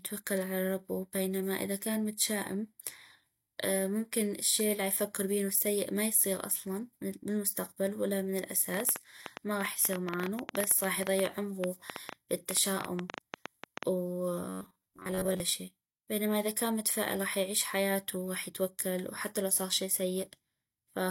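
A recording of speech carries two faults. From 8.74 to 13.84 s, just after "اصلا بالمستقبل ولا من", a train of clicks appears, likely from interference or a faulty connection injecting pulses. About 50 similar clicks arrive unevenly, near 8.9 per second, ticking roughly 15 dB above the speech and audible in pauses too. Then from 14.49 to 15.41 s, just before "شي بينما اذا كان", there is robotic sound from repeated short buffers: audio likely arrived too seldom, so a roughly 10.7 ms segment was looped over most of that stretch while real audio was skipped. That loop imposes a rigid 93.8 Hz metallic buzz that only loosely tracks the speech.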